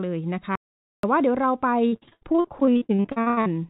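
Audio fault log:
0.56–1.03 s, audio dropout to silence: the sound cuts off abruptly and returns about 0.48 s later, with silence and no room tone in the gap. The input was likely lost for a moment while the recorder kept writing zeros, so that audio is gone.
1.88–3.48 s, repeated packet loss (robotic sound): about twenty short holes, the longest 85 ms, break up the audio, and roughly half the span is patched by stretching the preceding sound. That constant patching gives a choppy texture with pieces missing, heard through band-limited audio with nothing above 4 kHz.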